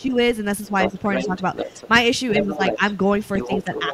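From 0.00 to 0.14 s the speech drops sharply, by roughly 15 dB. It then dips more gently, by a few dB, at 0.67 to 1.35 s, 2.4 to 3.02 s and 3.47 s to the end. This is speech suppressed in double talk, likely the echo canceller turning the talker down while the far end is also active.

Overlapping these dips, at 0.81 to 1.88 s, 2.3 to 2.93 s and 3.33 s to the end, the other side's voice leaks through. It is a second voice sitting a little below the talker and quieter in the last stretch, likely loudspeaker echo the canceller did not fully remove.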